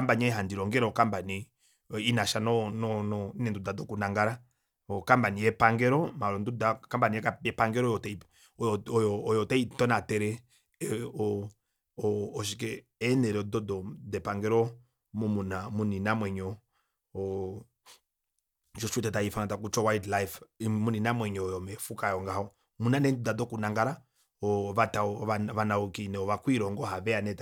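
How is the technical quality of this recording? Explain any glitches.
No glitches turn up anywhere in this speech recording. Nothing interrupts or disturbs the audio at any point.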